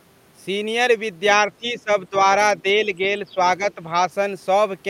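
A speech clip where the talker keeps getting pulled down in short bites: around 1.37 to 1.89 s the level sags hard, roughly 15 dB at worst, then again at 2.1 to 2.26 s by about 10 dB, with milder dips of about 5 dB at 2.62 to 3.08, 3.24 to 3.37 and 3.58 to 3.98 s. That pattern is likely speech suppressed in double talk, where the echo canceller cannot separate the near talker from the overlapping far-end echo and ducks the near talker along with it.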